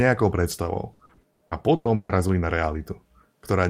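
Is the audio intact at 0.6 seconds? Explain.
No. Just before that point, two lost packets were rebuilt from error correction, at 0.51–0.53 s and 0.55–0.57 s, each 20 ms. The following packets carried low-bitrate copies, so nothing drops out. Both patches sound briefly rough and noisy, not silent or smeared like plain concealment.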